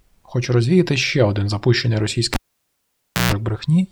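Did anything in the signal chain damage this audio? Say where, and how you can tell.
Yes, in the analogue wiring: a cable pulled and plugged in at 2.34 s pops, goes near-silent for about 0.94 s, including a 0.14 s burst of 60 Hz buzz, before speech returns at 3.33 s.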